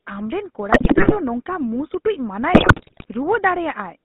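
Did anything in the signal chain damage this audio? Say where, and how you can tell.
Yes. GSM full-rate codec, throughout: the speech is confined to roughly 200 Hz–3.7 kHz and carries a buzzy, gravelly roughness from pulse-driven vocal-tract modelling, consistent with 13 kbps full-rate coding.

GSM bit errors, network stage, at 0.72–1.17 s (just before "ᱱᱚᱝᱠᱟ ᱢᱩᱸ") and at 2.52–3.05 s: squawks, pops and gargling where corrupted filter, pitch and gain values distorted decoded frames.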